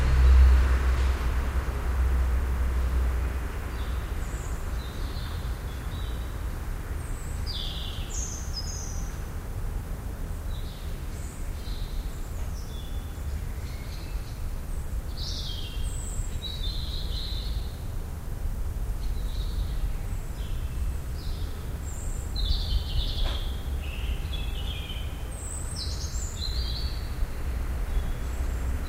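At 10.16 s, 20.58 s and 28.05 s there are brief lost LE Audio frames. The first gap lasts about 15 ms, which fits two 7.5 ms frames. The other two last 7.5 ms each, which fits one frame. The decoder filled each gap by repeating the last spectrum with random signs. Any tonal content turns into a short noisy smear. Each gap is too brief for the fade toward silence to be heard.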